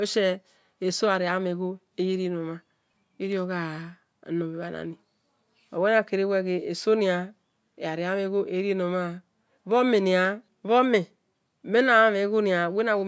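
No technical faults are audible anywhere in the speech recording.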